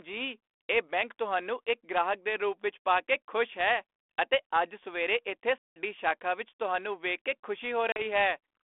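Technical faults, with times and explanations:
5.58 to 5.76 s and 7.92 to 8.01 s, packet loss on an ADPCM call: hard silent gaps of 180 ms after "ਅਤੇ ਅੱਜ ਸਵੇਰੇ ਇੱਥੇ" and 40 ms after "ਵਿੱਚ ਤੁਹਾਨੂੰ ਵੇਖ ਕੇ". The decoder's predictor and step size lose sync with the sender, so speech returns with brief, slight distortion.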